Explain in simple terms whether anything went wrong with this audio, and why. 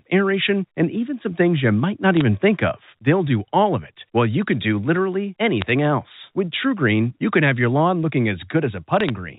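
Bit errors on a digital phone line flipped a few stored values, causing brief clicky crackle over the speech at 2.17–2.21 s, 5.61–5.69 s and 9.00–9.10 s.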